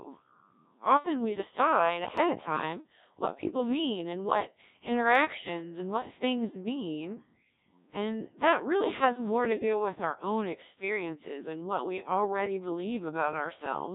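From start to finish the speech carries Codec 2 vocoder damage, and it is heavy. Only pitch, voicing, energy and a coarse spectral envelope survive, and the decoder rebuilds the voice from summed sine waves. The result sounds robotic and buzzy, coded at a rate near 1.3 kbit/s. On a spectrogram the harmonics look unnaturally regular, with a smeared, blocky envelope. The waveform's fine shape is gone, replaced by smooth, periodic synthetic cycles.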